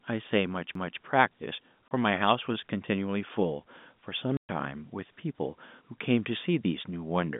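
At 0.75 s there is a CD skip: the pickup laser was jolted off its track by a knock or a flaw and landed on another turn of the disc's spiral. The player mutes briefly, for a few milliseconds, then resumes reading from the new position. The result is a small tick, and the speech continues from a different point rather than where it left off, so the flow jumps abruptly.

At 1.89 s, packet loss filled with silence cuts a 30 ms hole into the speech. The receiver had nothing to play for that span and inserted digital silence, which points to a single lost 30 ms packet. A second, longer dropout runs from 4.37 to 4.49 s. It lasts 120 ms, which fits four consecutive lost packets. Both gaps start and end with hard edges, and the longer one leaves a chopped-out stretch. The surrounding audio carries the narrow 150 Hz to 3.6 kHz line band of G.711 A-law telephone coding.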